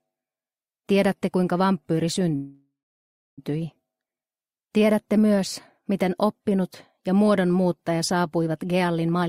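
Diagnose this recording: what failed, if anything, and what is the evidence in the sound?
A call audio freeze at the network and jitter-buffer stage, from 2.35 to 3.40 s. For about 1.02 s the receiver kept extending the last sound, which fades out, and roughly the final 650 ms of that fill is silence. Nothing is lost; the audio resumes where it stopped, now about 1.02 s later. A likely cause is packets stalling in transit until the buffer ran dry. On a spectrogram the last frame's spectrum smears into a fading band, then a blank gap; the waveform shows a decaying tail, then flat line.

A jitter buffer speed-up, also at the buffer stage, covers the last stretch from 9.12 s to the end at 9.28 s. Playback runs at about 169% speed with unchanged pitch, as the receiver cuts out short pitch-period pieces, roughly a tenth of a second in total, to bring its backlog down after it held more audio than it aims for. 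The sound is noticeably hurried. On a waveform the periods look compressed in time, with small splice points. On a spectrogram harmonic spacing stays the same while events crowd closer together.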